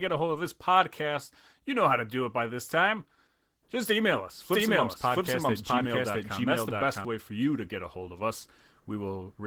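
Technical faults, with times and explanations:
Throughout: Opus voice compression. The speech sounds hoarse and slightly robotic, with plainly audible coding damage. The full band is kept, but the excitation is coded coarsely. That fits hybrid Opus at about 16 kbps, with SILK below 8 kHz and a thin CELT layer above.
4.53 to 7.05 s: doubled audio track. A second full-band copy of the speech runs about 0.7 s behind, at roughly the same level. It has no decay or room colour, and it starts and stops abruptly. It is likely a second capture through a slower path.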